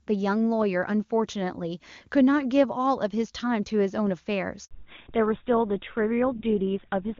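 At 4.65 s the call switches networks and no speech frames arrive. This handover gap silences the speech for 60 ms, and that stretch is lost. From 4.71 s the call makes a fallback to narrowband, from clear HD Voice to GSM full rate. Everything above 4 kHz vanishes, and the speech turns duller and rougher.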